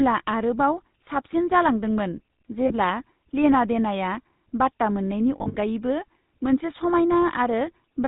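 The whole clip has been through the GSM full-rate codec, and you can plainly hear it. The vocal tract is modelled and then driven by a sparse, regularly spaced pulse train, so the speech comes out buzzy and gravelly, with nothing above 4 kHz. That thin, rasping, band-limited character fits the old 13 kbps full-rate mode.

On top of that there are lost GSM frames. At 2.68 to 2.73 s a single 20 ms frame drops out. The decoder just repeats the last good frame's settings, so you get a brief metallic ring instead of a gap. The bigger hit is at 5.38 to 5.56 s, where about 120 ms goes missing across a 160 ms stretch, with the longest run around 70 ms. There the sound hangs on a rough, ringing smear before normal speech returns.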